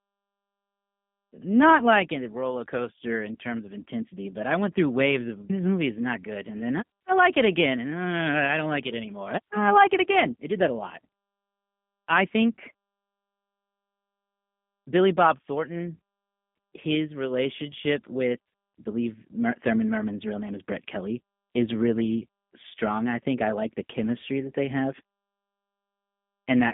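From start to finish, the speech carries G.729 codec damage, and it is plainly audible. The band is squeezed to roughly 150 Hz to 3.5 kHz, with nothing above 3.6 kHz. The codec does not keep the waveform. It rebuilds each frame from a vocal tract filter, a pitch predictor and a few pulses. That sparse rebuild makes the speech sound rough and slightly synthetic, which fits an 8 kbit/s stream.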